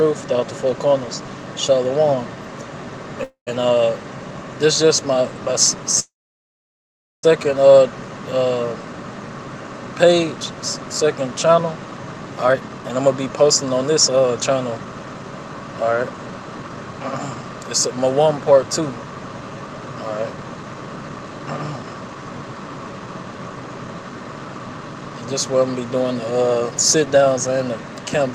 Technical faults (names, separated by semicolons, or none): call audio freeze; jitter buffer speed-up